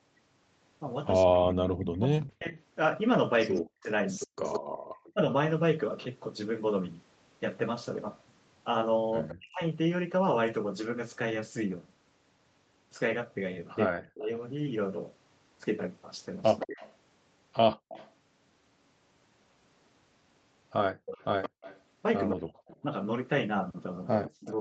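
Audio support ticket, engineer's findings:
Speech suppressed in double talk, 1.26–5.18 s, 9.33–9.62 s, 13.89–14.29 s, 22.34–24.54 s. Talker drops as much as about 40 dB, in pieces, while the far end is also active. Likely echo canceller misjudging near-end speech as echo and attenuating both.

Echo leak, 2.25–4.6 s, 9.28–9.35 s, 16.59 s to end of clip. Delayed copy of the talker trailing by 169 ms, about 15–20 dB below the direct speech. Likely far-end loudspeaker pickup not fully removed by that side's canceller, returned down the line.

Background gated by the echo canceller, 17.77–17.89 s and 20.94–21.61 s. Room sound drops by about 36 dB for brief moments, then recovers. Canceller clamping the microphone hard during loudspeaker playback and releasing once playback stops. Band-limit at 8 kHz fits the Opus call path.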